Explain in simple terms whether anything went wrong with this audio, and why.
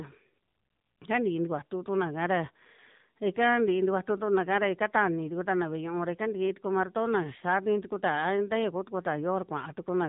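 The whole clip went through the AMR narrowband mobile codec, the old phone-call squeeze. Nothing above 3.8 kHz survives, so the speech sounds muffled, buzzy and a bit robotic.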